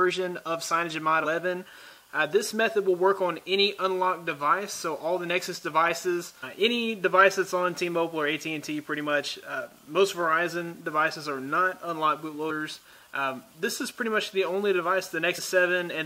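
Damaged data in a compressed stream causes brief glitches at 1.23–1.25 s, 12.49–12.51 s and 15.37–15.39 s. Corrupted frames make the decoder misread them and lose sync.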